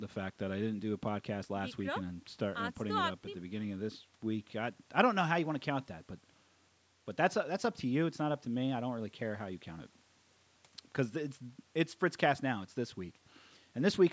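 Speech that has passed through a call's microphone processing, whose high-pass filter removes the lowest bass and whose bandwidth stops at 8 kHz, both normal for that path, and nothing in the signal points to a technical fault.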